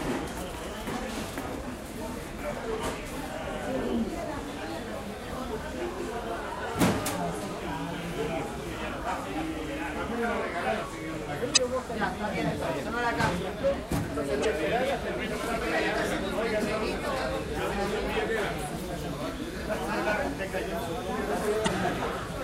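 A recording of sounds with damaged data in a compressed stream: brief glitches at 5.27–5.30, 11.53–11.58, 14.41–14.45 and 21.64–21.68 s, where corrupted frames are misdecoded. Each shows as a thin vertical disturbance on a spectrogram.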